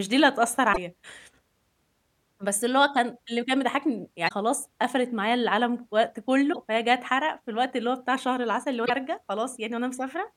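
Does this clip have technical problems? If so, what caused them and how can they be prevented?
Yes: damaged data in the compressed stream made the decoder misread frames and lose sync, giving brief glitches at 0.69–0.78, 4.25–4.32, 6.49–6.56 and 8.82–8.90 s. Verify transfers with checksums and keep metadata out of the audio frames.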